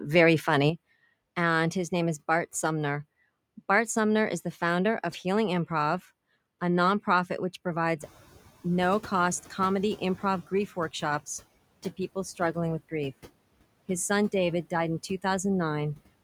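Noise suppressor artifacts run through the whole clip. The suppressor treats steady background as noise and pulls those frequency bands down by about 20 dB, frame by frame. The residual noise therefore drops away in the gaps and swells back under the speech.

At 0.70 s the overall level falls abruptly by about 6 dB and stays down to the end. That step is the signature of one channel dropping out, with the remaining channel summed to mono. Material shared by both channels loses half its amplitude. Anything carried only in the lost side vanishes outright. The sudden, sustained drop points to a likely channel loss rather than a change in the source.

Noise suppressor catching up occurs from 8.00 to 8.24 s. Around 8 s the room noise jumps by about 13 dB, settling about 19 dB below the speech. The suppressor's noise estimate lags behind that rise. For roughly 240 ms the louder background comes through with only about 11 dB of reduction. 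It then sinks back as the estimate adapts to the new floor.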